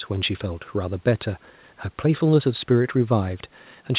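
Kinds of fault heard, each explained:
No kinds of fault are heard in this speech clip.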